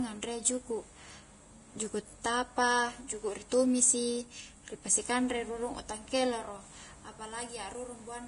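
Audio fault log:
Throughout, Vorbis compression: the speech is hissy and grainy with nothing above 10.6 kHz, likely heavy Vorbis coding turning treble detail into noise, fitting about 30 kbps.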